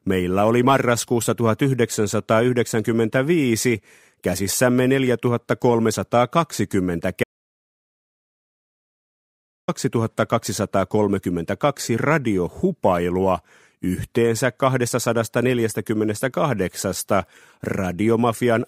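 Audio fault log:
7.24–9.68 s, audio dropout to silence: the sound stops abruptly mid-flow and the clip goes completely dead for about 2.4 s, with no room tone or background underneath, then the audio resumes just as suddenly. Whatever was happening during that stretch is simply missing. The likely cause is a lost input, whether a disconnected device, a failed link or an accidental mute, while recording or encoding carried on and wrote silence into the gap.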